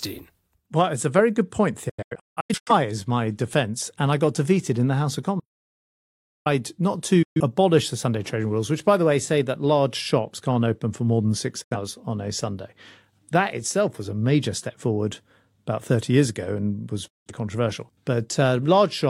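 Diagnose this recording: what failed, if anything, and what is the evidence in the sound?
Digital broadcast dropout at the network and codec stage: the receiver muted on failed frames, cutting speech with 8 ms fades at 1.89–2.72 s (scattered holes), 7.22–7.40, 11.62–11.76 and 17.08–17.32 s.

Audio dropout to silence, likely from a lost input link while recording continued: speech stops dead from 5.40 to 6.46 s, leaving silence with no room tone.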